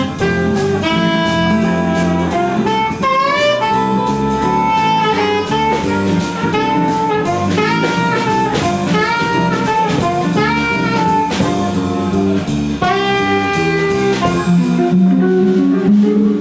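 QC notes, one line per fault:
No audible faults found anywhere in the clip.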